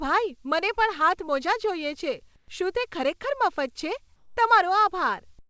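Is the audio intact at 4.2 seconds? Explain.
No. From 4.16 to 4.37 s, about 210 ms, there's comfort noise in place of the background, a steady, featureless hiss about 2 dB quieter than the real ambience. Likely the sender's voice detector paused transmission, so the receiver synthesised roughly matching filler noise.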